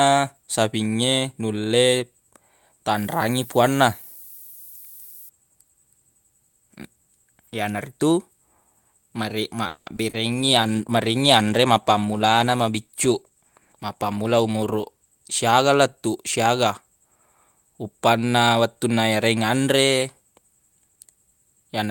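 From 2.96 to 5.29 s there is low bit depth with noise shaping. The sound is carried on about 8 bits. The rounding error is pushed upward in frequency by feedback. The result is a steady, thin hiss, about 20 dB below the signal. It grows much stronger toward the top of the band. It stops at 5.29 s.

At 9.67 s the audio freezes for about 190 ms, until 9.88 s. The last sound is drawn out as a fading buzz or hiss. It never drops to full silence. This is a call audio freeze. Packets were likely held up in transit, and the jitter buffer ran dry. When they arrive, the audio resumes where it stopped. Nothing is lost, but everything after runs about 190 ms later.

Two short concealed packet losses follow. The first is at 9.96 to 9.99 s. About 20 ms of audio never arrived, and roughly 10 ms of filler covers it. The second runs from 10.09 to 10.29 s. About 40 ms is missing, and about 40 ms of synthesized sound fills the hole. 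Each time the receiver extends the last sound, then blends back. Both are heard as a brief smear or wobble. A short sound can vanish there.

From 10.33 to 15.19 s there is a call bitrate drop. The encoder falls from 32 to 16 kbps and stays at the lower rate for about 4.9 s. With half the bits, detail is coded more coarsely. The sound turns rough and watery. It clears when the rate returns at 15.19 s.

Inside that stretch comes a jitter buffer speed-up, from 13.20 to 14.35 s. The buffer was holding more audio than it targets. To cut delay, it removed short pitch-period pieces many times in a row. About 200 ms disappears in total. Playback runs at about 116 percent speed, with pitch unchanged. This passage sounds hurried, and it still carries the rough coding of the bitrate drop.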